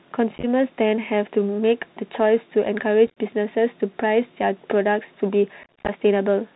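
The whole clip passes through a Bluetooth CVSD headset codec, a 64 kbps one-bit delta scheme with an adaptive step. It cuts everything above 4 kHz, so the speech sounds narrow. Its slow step smears loud high sounds and roughens s sounds, and a granular hiss sits underneath.

Unconcealed Bluetooth headset packet loss then drops voice packets with nothing filled in, at 0.36–0.45 s (about 49 ms lost over 75 ms), at 3.07–3.18 s (about 68 ms over 105 ms, longest gap 26 ms), and at 5.63–5.91 s (about 146 ms over 251 ms, several dozen packets). Each burst comes out as chopped crackle.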